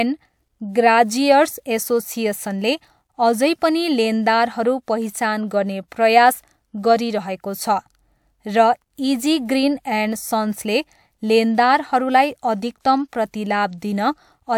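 No technical faults can be heard anywhere in this recording.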